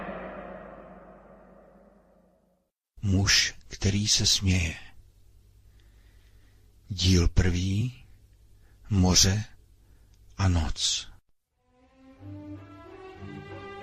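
A jump at 7.80 s marks compressed frames skipped: about one frame of audio, some 20 ms, never played, so the sound jumps ahead.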